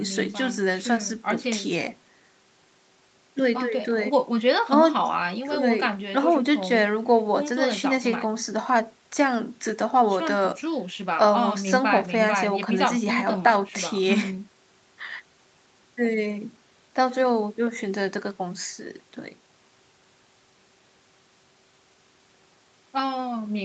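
Nothing technically wrong can be heard in this recording of speech. It has been through a call's microphone processing, which leaves no content above 8 kHz and takes out the lowest bass with its high-pass filter, as that processing normally does.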